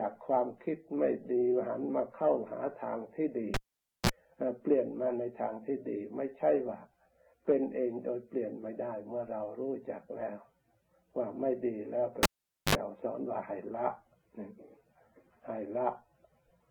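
At 3.54 s a live cable is pulled and plugged in again. A pop marks the break, then the signal drops to near silence for about 0.50 s. As the plug goes back in, a 31 ms burst of 60 Hz mains buzz sounds while only the tip makes contact, and a second pop comes as the sound returns at 4.09 s. The same fault repeats from 12.23 s: a pop, 0.47 s of near silence, a 59 ms burst of 50 Hz buzz, then a pop at 12.75 s.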